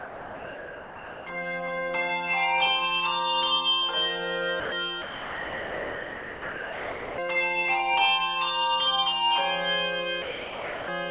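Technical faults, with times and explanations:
0.00–1.26 s, 4.60–4.72 s, 5.02–7.18 s and 10.22–10.88 s: sound dropped by the voice detector. The sound gives way to steady, featureless noise, then returns when the detector triggers again. The sender's detector likely classed the signal as background and stopped sending, so the receiver played comfort noise in its place.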